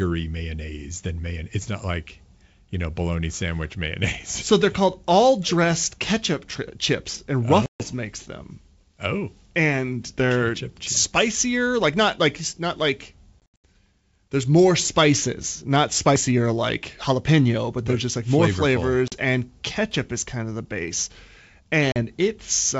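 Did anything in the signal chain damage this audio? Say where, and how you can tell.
Yes, at the network stage: packet loss on an ADPCM call, over a G.722 wideband link. Hard-edged silent holes open at 7.66–7.82 s after "chips and oh", about 140 ms, which points to roughly seven lost packets; at 13.40–13.65 s after "not like not like", 180 ms lost in bursts no longer than 80 ms; and at 19.08–19.15 s and 21.92–21.97 s, 40 ms each. After each gap the decoder's adaptive predictor and step size no longer match the sender's, so speech returns slightly distorted.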